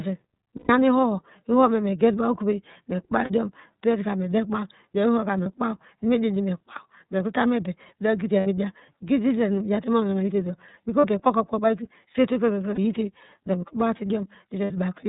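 It's speech, and the whole thing runs through the iLBC codec. Nothing gets through above 4 kHz, and the voice has that slightly rough, synthetic edge you hear plainly, which fits iLBC's 30 ms frame mode at about 13.33 kbps. On top of that there are lost iLBC frames at 0.56, 3.24, 5.43, 8.4, 11.01, 12.75 and 14.63 s. Each gap is filled with a held, faintly buzzy vowel where the decoder keeps replaying the last pitch cycle with noise. The longest is the 120 ms one at 0.56 s, and the 3.24, 8.4 and 14.63 s gaps run about 60 ms each. After every gap the voice snaps back almost immediately.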